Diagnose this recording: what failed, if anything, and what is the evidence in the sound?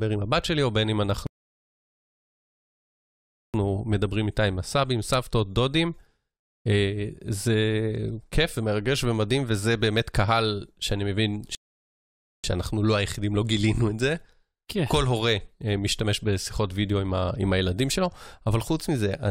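Rebuffering stall at playback. Silence runs 1.27–3.54 s and 11.55–12.44 s. The speech resumes where it stopped. The buffer emptied, adding time without losing any.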